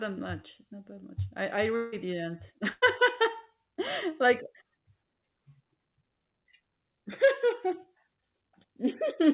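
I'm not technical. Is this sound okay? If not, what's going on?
No. Right after "that much I I", at 1.76 to 1.94 s, there's a network dropout, likely a long network dropout. About 0.16 s of speech never arrived. The receiving end filled the hole by stretching the last sound into a brief buzz or hiss that fades, with no fully silent moment. Then the speech picks up again a little further on, so that short piece of what was said is simply gone.

At 2.70 to 2.84 s there's a burst of packet loss: a small run of the audio's data pieces got lost or arrived too late, costing about 0.12 s. The receiver covered the gap the same way, holding the last sound and letting it fade as a short buzz or hiss, then jumped ahead. That bit of speech is missing.

The call line itself carries nothing above 4 kHz, which gives the phone-like sound.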